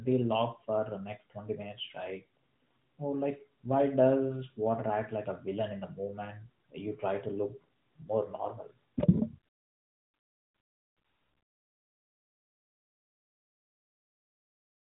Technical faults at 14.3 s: none

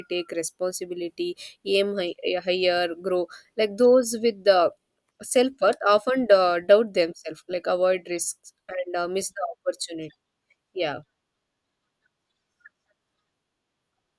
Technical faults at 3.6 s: none

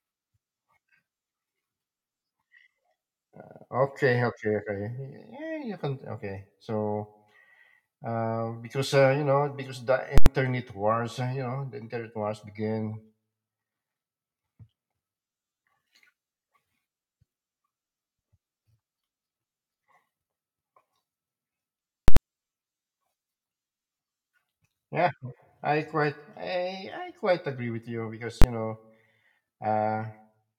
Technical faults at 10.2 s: invalid numbers at full scale

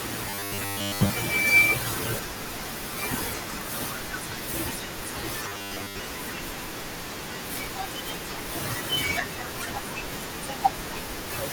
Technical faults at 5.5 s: robotic sound from repeated short buffers

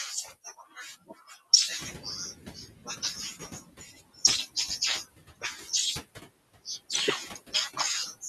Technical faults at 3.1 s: noise suppressor artifacts; noise suppressor catching up

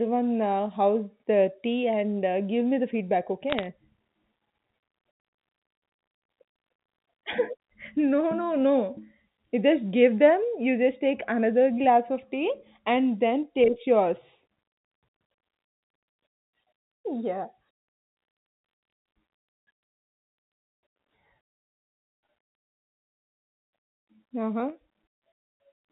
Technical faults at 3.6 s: bit errors on a digital phone line

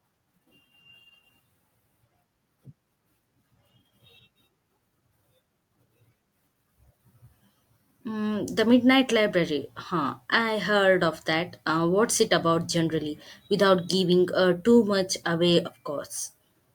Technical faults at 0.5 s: none

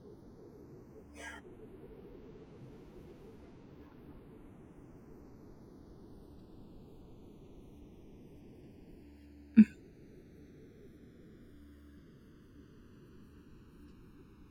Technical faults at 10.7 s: channels drifting apart

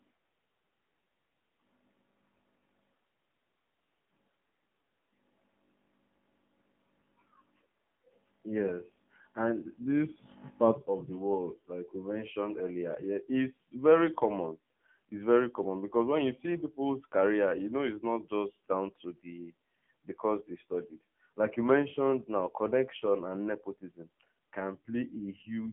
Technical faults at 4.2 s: AMR narrowband mobile codec

